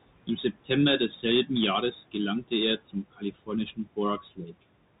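A speech recording carries two faults from start to finish. The first is the Bluetooth CVSD headset codec. Nothing passes above about 3.8 kHz, so a spectrogram shows a hard ceiling there. Sibilants turn scratchy, and a granular hiss sits under the voice, which fits a 64 kbps one-bit delta stream whose adaptive step can't keep up with loud, bright sounds. The second is noise suppressor artifacts. The room noise, about 16 dB below the speech, is pulled down by roughly 21 dB in gaps and swells back under the voice. The suppressor also causes speech cut by the noise suppressor in four places: 0.27–0.7 s, 2.78–3.5 s, 3.66–3.98 s and 4.21–4.63 s. There it mistakes quiet consonants and word endings for noise and drops them by about 16 to 19 dB, for a tenth to a third of a second in total within each span. These show on the waveform as abrupt dips in the envelope, and on the spectrogram as missing energy.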